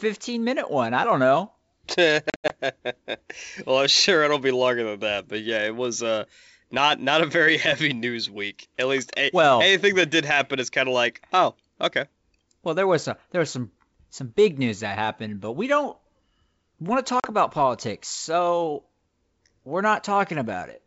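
Packet loss on an ADPCM call hits at 2.30 to 2.54 s, where about 140 ms of speech drops out in hard-edged silent gaps scattered across 200 ms, the longest run 80 ms. It recurs at 17.20 to 17.28 s, a 40 ms hole between "want to" and "about politics so". In each gap the G.722 decoder's predictor and step size drift from the sender's, so speech resumes slightly distorted before resettling.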